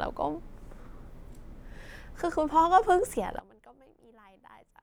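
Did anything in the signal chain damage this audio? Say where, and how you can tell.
Yes. From 3.39 s to the end the speech suddenly drops by about 24 dB to a faint trace. That's one channel inverted, likely from a polarity-swapped lead in the analogue wiring, so the centred voice cancels when the two channels are summed to mono.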